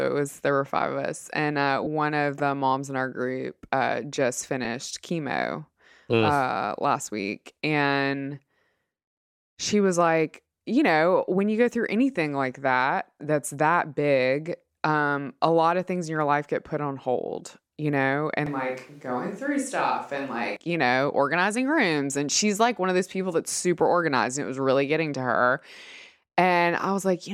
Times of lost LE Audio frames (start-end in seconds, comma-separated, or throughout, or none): 1.84-1.87, 4.65